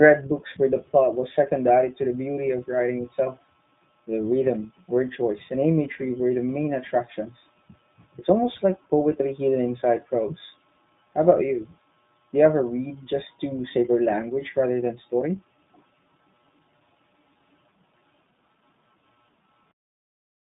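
From start to end, the speech carries iLBC codec coding. The band runs only from 150 Hz to 3.7 kHz, so it sounds thin and telephone-like. Each frame's excitation is coded alone, which fits 20 ms frames at 15.2 kbps. The roughness and synthetic edge are plainly audible.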